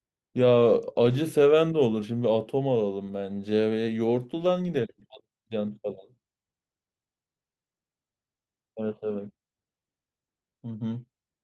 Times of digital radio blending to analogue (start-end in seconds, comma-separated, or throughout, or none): none